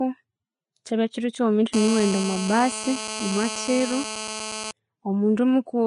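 Throughout the speech, the treble stops near 10.5 kHz and the upper band sounds grainy and hissy, with roughened tones and softened consonant attacks. This plainly audible damage is likely Vorbis compression, at a rate that fits roughly 34 kbps. Its hiss follows the speech, unlike a steady background noise floor.

From 1.74 s to 4.71 s, a GSM phone buzz sits about 9 dB below the speech. It is a hard, raspy tone at 217 Hz, full of harmonics. A nearby 2G phone on a call sends radio bursts at that rate, and the audio circuitry rectifies them. The buzz holds steady, ignores the speech, and its 217 Hz pitch is unrelated to 50 or 60 Hz mains hum.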